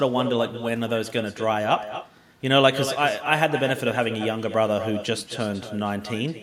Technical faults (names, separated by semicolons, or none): echo with no canceller